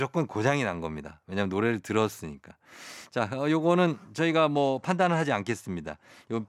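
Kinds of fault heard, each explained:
Bluetooth SBC bit pool drop: From 4.54 s to the end, the speech turns dull and gritty. A congested link has cut the encoder's bit budget. Top sub-bands get few bits, and the rest are coarsely quantised. This fits a drop to about 108 kbps.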